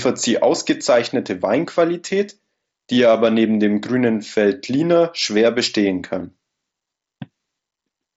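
Gain pumping runs through the whole speech clip: the gain swells up in the pauses and ducks by around 5 dB under each loud syllable, likely from input gain set too high with a fast limiter clamping down. Unlike a noise gate, the floor never cuts to silence. The band stops near 7.7 kHz, as a Bluetooth mSBC headset link passes it.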